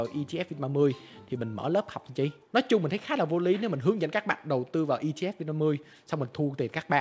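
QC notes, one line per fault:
Nothing stood out on listening, and the audio keeps the steady 8 kHz top end expected of a G.722 call path.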